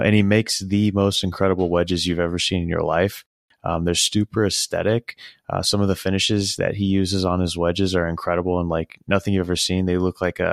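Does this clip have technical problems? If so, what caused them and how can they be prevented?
No, this clip has no technical problems, so there is nothing to prevent.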